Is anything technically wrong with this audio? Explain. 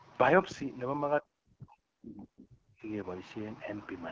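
Yes, two faults are audible. Throughout, the speech passes through the AMR wideband (HD Voice) codec at a low rate. The coarse pulse excitation and noise-filled band above 6.4 kHz make it plainly rough and raspy, which fits a bitrate near 8.85 kbit/s.

From 1.21 to 2.89 s the speech is suppressed in double talk, likely because the echo canceller could not separate the talker from the loudspeaker echo of overlapping far-end speech. It turns the talker down by as much as about 40 dB, chopping roughly one and a half seconds into dips and gaps.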